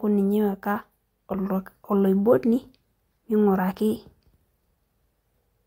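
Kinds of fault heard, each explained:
Nothing stood out on listening; the speech came across without any audible technical problem.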